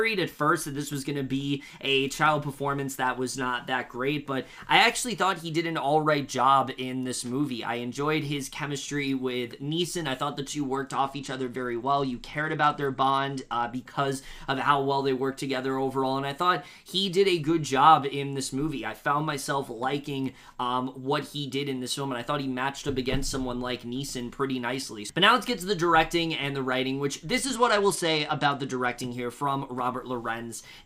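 Around 10.93 s the top end suddenly goes dull and a gritty, grainy noise creeps in, hanging on until 13.72 s. It comes back from 27.44 to 28.97 s. That's a Bluetooth SBC bit pool drop. The link got congested, so the encoder starved the upper sub-bands and quantised the rest roughly. The loss sounds like a fall from a bit pool of 28 to about 12, which fits a rate near 96 kbps, before recovering.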